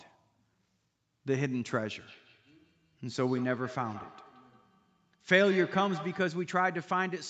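From 2.06 s to 6.42 s there is feedback echo between two devices. A second device on the call replays this microphone's signal into the room, where it is picked up again, beyond the local echo canceller's reach. The speech returns roughly every 150 ms, peaking about 14 dB below the direct speech, audible within a band that stops at 8 kHz.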